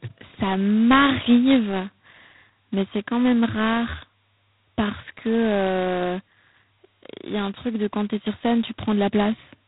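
From start to finish the speech carries a harsh, rasping hiss that rises and falls with its level, grainy on loud syllables and thinning in quieter stretches, and nothing sounds above about 3.9 kHz. This is G.726 ADPCM coding with heavy damage: each sample is sent as a small difference from an adaptive prediction, and the coarse steps point to the 16 kbit/s mode, where too few bits leave loud quantisation noise tied to the signal.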